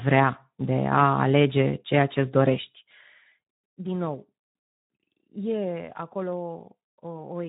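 From start to finish, the speech carries the marks of the Speex codec, and the damage is plainly audible. Speex is a CELP coder, and at this low setting it has too few bits to model the excitation properly, so voices come out hoarse and grainy with a noisy edge. The band also stops hard at about 3.8 kHz, which leaves it dull and phone-like. All of that fits a bitrate of around 11 kbps.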